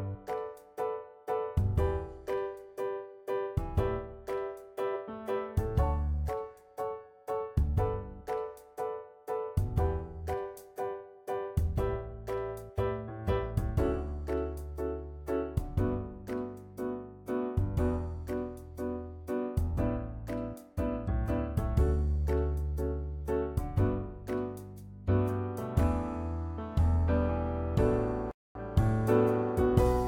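Right near the end, at 28.31 s, there's a playback stall: the sound cuts out mid-flow and stays silent for about 0.24 s before coming back at 28.55 s. The likely cause is the player running dry of data or its thread getting blocked briefly.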